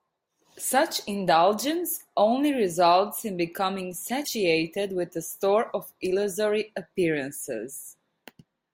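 At 4.21 to 4.28 s the speech has damaged data in a compressed stream: corrupted frames make the decoder lose sync, producing a brief disruption heard as a chirp, squawk, click or short hole.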